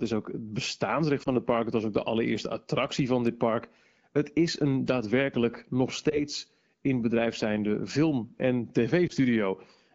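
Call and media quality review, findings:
Lost AMR speech frames: brief dips or warble at 1.23–1.29 s (after "is ook het bestaansrecht", before "het park"), 6.10–6.19 s (after "is een daadwerkelijk nog") and 9.07–9.13 s. Each fits one lost 20 ms frame concealed by the AMR-WB decoder, which repeats the last good pitch and vocal-tract settings at reduced gain. On the waveform, a short amplitude sag. On the spectrogram, smeared harmonics.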